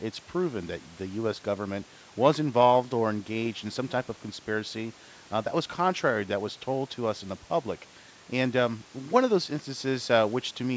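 No technical faults are audible.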